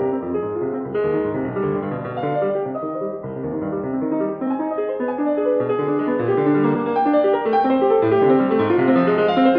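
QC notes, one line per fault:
No faults heard in this music clip.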